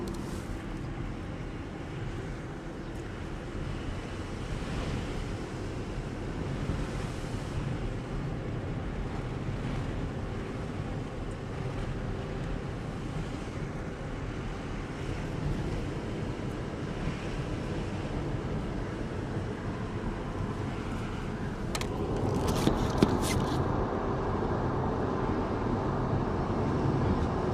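From 8.63 to 11.44 s and again from 12.28 to 14.43 s, jitter buffer speed-up trims short pitch-period pieces, about 0.17 s in total, so the sound runs 4% fast at unchanged pitch.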